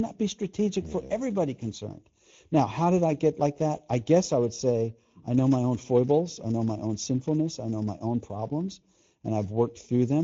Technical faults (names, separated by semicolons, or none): channel delay (comb filtering); Speex codec